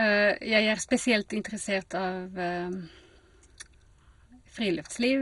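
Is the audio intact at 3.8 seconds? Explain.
No. At 3.8 s, as across the whole clip, the speech is dull and gurgling with granular distortion, likely from MP2 compression at a low rate. Starved upper sub-bands switch off and the survivors are coarsely quantised. A spectrogram shows nothing above 11.2 kHz, with patchy bands flickering beneath.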